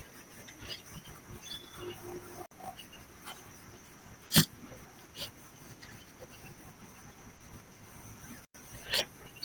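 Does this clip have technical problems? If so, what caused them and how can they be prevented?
Yes. A block size mismatch (truncated) runs through the whole clip. Each block loses its tail, so a 50 Hz buzz sits under the speech, and it plays 1.16 times fast at roughly normal pitch. This fits a 1024-sample write block. Prevention: match block sizes between the stages.

There are two digital wireless dropouts. One runs from 2.46 to 2.51 s and mutes for about 62 ms. The other runs from 8.45 to 8.55 s and mutes for about 112 ms. Each is a clean, near-silent hole with no noise burst. The receiver lost too much data and muted. Prevention: shorten the radio path and clear interference.

Short concealed packet loss occurs at 4.27–4.33 s and 7.37–7.43 s. Each time, 40 ms arrived too late. The decoder extended the preceding sound and blended back, leaving a brief smear. Prevention: use a larger jitter buffer and a steadier network connection.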